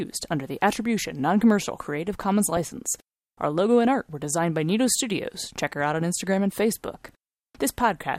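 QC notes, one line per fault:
2.53–2.71 s, DAB burbling: weak-reception bit errors slip past error correction, so MP2 sub-bands jump in level, giving short noise blips over the speech without the silent gap of a dropout.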